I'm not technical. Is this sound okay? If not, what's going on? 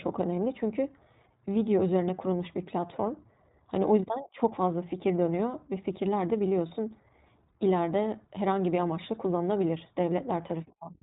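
No. The whole clip carries the sound of the iLBC codec, a low-quality phone-style compression used for internet calls. It throws away everything above about 3.8 kHz, so the speech sounds narrow and muffled, like an old telephone line. It also rebuilds the voice in short independent chunks, which points to 20 ms frames, and that leaves a plainly audible rough, slightly synthetic edge on the speech from start to finish.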